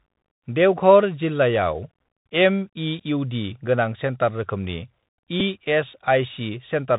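From start to finish the speech runs through a Bluetooth CVSD headset codec, the narrowband 64 kbps one-bit scheme, and its damage is plainly audible: nothing above 4 kHz, a grainy hiss underneath, scratchy s sounds, and loud bright moments smearing because the adaptive step can't keep up.

At 5.4 s there's a Bluetooth headset packet repeated. The link dropped audio and the headset replayed the previous packet's bits to fill the gap. It's about 7.5 ms of repeated sound, which points to a couple of lost 3.75 ms packets.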